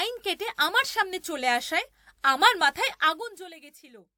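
A rapid ticking, like a zip being drawn, rides on the speech from 2.92 to 3.56 s while the level falls by roughly 20 dB. This is zipper noise: the gain drops in coarse 2 dB steps, around twenty per second, with no smoothing between them. Each sudden step puts a small discontinuity into the waveform, and the run of them is heard as a string of clicks that follows the fade.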